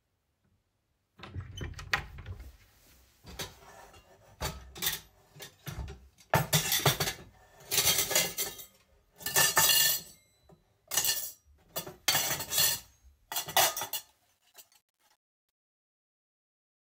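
From 13.77 s to the end at 16.95 s, the fade-out is processed by a gain stage that discards low-order bits without dither, which fits a path holding only 10 bits. As the level sinks toward the smallest step, the waveform collapses into coarse square steps. This truncation distortion on the fade makes the tail gritty, and from 14.56 s onward the grit is at its worst.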